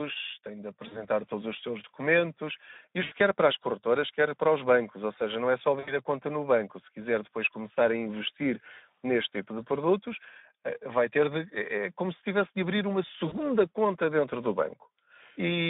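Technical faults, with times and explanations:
Throughout: Speex codec at a low-to-middle setting, around 11 kbps, which starves the CELP excitation of bits and leaves the speech plainly hoarse and noisy. The line is narrowband, roughly 200 Hz to 3.7 kHz, so the upper range is gone entirely.
0.87–1.05 s, 3.03–3.14 s, 5.79–5.95 s, 13.27–13.35 s: VoIP packet loss concealed by the speech codec. Gaps of 40 to 80 ms were bridged by extrapolating the last pitch and filter, so the speech smears into a fading buzz or coloured noise, then stays weak briefly as the decoder recovers.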